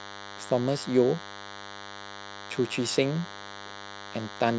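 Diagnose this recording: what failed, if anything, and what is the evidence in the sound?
What failed here is the analogue side: there's DECT cordless phone buzz riding under the speech for the whole clip. It's a thin, rasping buzz at 100 Hz with a dense stack of harmonics, sitting roughly 15 dB below the speech. A DECT handset or base nearby fires a radio burst every 10 ms, and the audio circuit rectifies it into audio.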